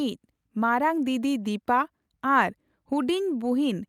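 No technical faults occur at any point in the speech, so there is nothing to describe in time order.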